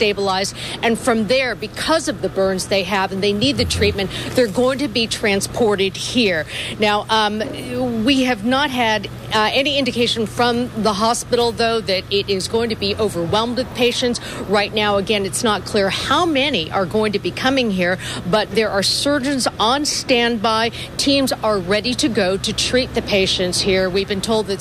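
No faults to report; nothing in the audio departs from normal behaviour at any point.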